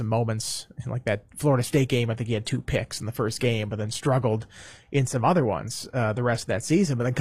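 From 1.50 s, after "moments in like that", an adaptive stream at a lower bitrate takes over. The treble cuts off at 14.9 kHz. The switch is sudden but leaves no gap, unlike a dropout.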